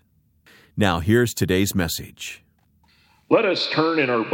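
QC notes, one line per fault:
Nothing here needs flagging; it all sounds just as it should.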